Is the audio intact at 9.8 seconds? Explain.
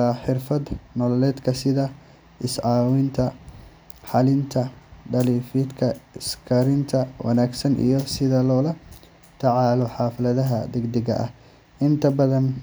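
No. At 9.82 s a single sharp click is heard, likely dropped samples: a fraction of a millisecond lost, so the waveform jumps. Unlike a dropout, no audible gap follows.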